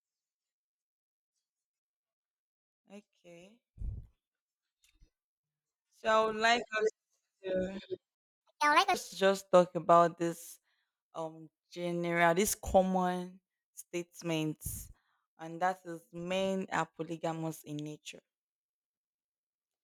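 At 8.15 s the speech cuts out in mid-flow and the output falls completely silent for about 0.26 s, until 8.41 s. The gap is too long and too clean to be a natural pause. This is a playback stall, with the player likely starved of data or its audio thread blocked, so nothing reached the output until it recovered and resumed.

From 8.41 s to 8.94 s the speech comes back hurried and noticeably high, with a chipmunk-like lift of roughly seven semitones. It settles back to normal pitch and pace around "to just talk about". This is catch-up at higher speed. To recover the time lost in the stall, the player resampled its backlog at 1.5 times normal rate. Because resampling changes pitch along with tempo, both rose together for that half-second before dropping back.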